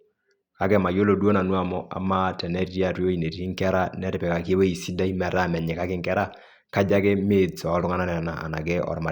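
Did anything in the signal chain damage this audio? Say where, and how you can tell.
No, nothing in the signal chain damaged this audio.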